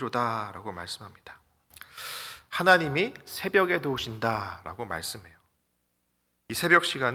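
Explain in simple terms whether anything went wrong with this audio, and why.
Nothing went wrong; no faults can be heard anywhere.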